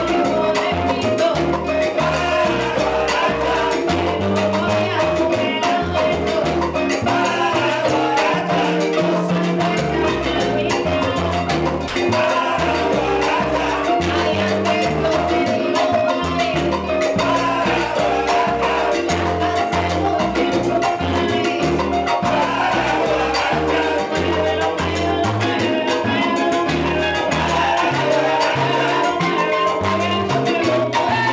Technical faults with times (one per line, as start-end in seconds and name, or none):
11.88-11.96 sound dropped by the voice detector